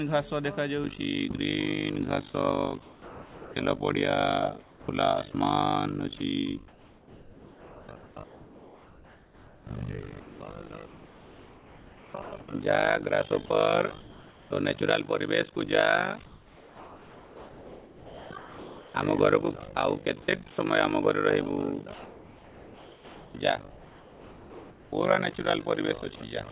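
From 0.84 s to the end, a fast, rough flutter runs through the audio, a robotic tremolo pulsing around 50 times a second, with level swings of about 60 dB. This is overlap-add ripple. The signal was split into windowed frames and rebuilt with an overlap that does not add up to a steady gain, so the level dips and recovers once per frame.

From 2.82 to 3.56 s the sound gives way to a steady, featureless hiss for 0.74 s, losing about 0.29 s of real material before it returns. This is sound dropped by the voice detector, likely because the sender judged the passage to be background, stopped transmitting, and left the receiver to fill the gap with comfort noise. The same thing happens briefly at 5.32 to 5.34 s and again from 12.22 to 12.32 s, where 0.1 s is lost outright.

In the pauses at 4.6 to 5.34 s, 6.68 to 12.48 s, 14.0 to 14.5 s, 16.26 to 18.94 s and 21.94 to 24.92 s, the real background disappears and a smooth, detail-free noise bed takes its place. 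At 14.0 s that noise sits about 2 dB lower than the background it replaces. This is comfort noise in place of the background, likely from discontinuous transmission, where the receiver synthesises rough background noise while the sender is silent. Throughout, the narrowband call path leaves nothing above 4 kHz.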